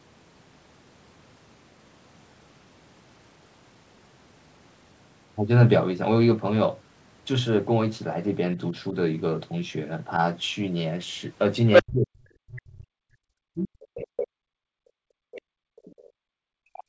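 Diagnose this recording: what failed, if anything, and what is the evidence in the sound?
Call processing stage, echo canceller: the other side's voice leaking through appears as a short burst of a second voice from 11.73 to 11.83 s, sitting a few decibels above the talker, and again from 13.54 to 13.69 s at a slightly lower level than the talker. The likely cause is that the loudspeaker signal reached the microphone and the canceller's estimate of that echo path did not fully subtract it.

The same stage shows speech suppressed in double talk from 11.82 to 13.11 s, from 13.86 to 14.71 s, and from 15.21 s to the end of the clip. The talker's level falls by something like 40 dB at its deepest. This likely comes from the suppressor treating near-end speech as residual echo and attenuating everything while both sides were talking.

Background gated by the echo canceller shows up from 13.39 to 13.54 s. 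The room noise drops out almost completely, by about 40 dB, for roughly 150 ms, then returns. That gap sits just ahead of the second leak at 13.54 s. The canceller's nonlinear processor clamped the microphone hard while it judged the loudspeaker to be dominant, and the noise floor disappeared with it. Across the clip, the band stops at 8 kHz, consistent with the G.722 call path.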